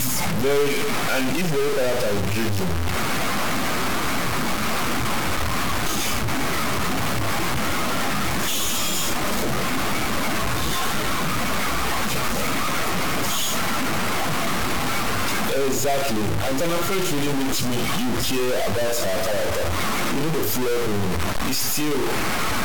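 Speech with a harsh, buzzy grit running all the way through, and noise filling the pauses. That's likely a stuck bit, with errors of about -20 dBFS.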